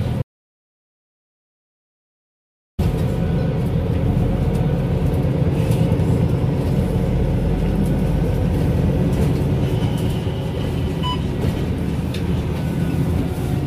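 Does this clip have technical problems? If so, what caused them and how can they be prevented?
Yes. An audio dropout to silence runs from 0.22 to 2.79 s: about 2.56 s of silence, no room tone, likely from the input being disconnected or muted. Secure cabling and monitor input levels during recording.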